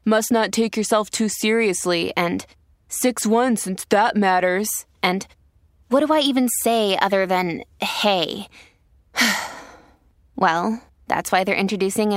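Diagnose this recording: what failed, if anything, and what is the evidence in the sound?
Nothing in the chain has failed: the speech signal arrives continuous and stable at every stage from capture through to playback, with no audible evidence of any disturbance.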